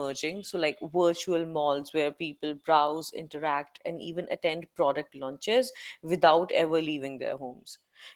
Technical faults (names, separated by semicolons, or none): Opus voice compression